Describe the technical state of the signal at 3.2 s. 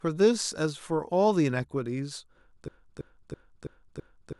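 At 3.2 s you're inside a broken-record loop that starts at 2.68 s and runs to the end of the clip. A 0.33 s fragment of speech repeats five times back to back, most likely because the player or stream stalled and kept resending its last chunk, so the real audio there is gone.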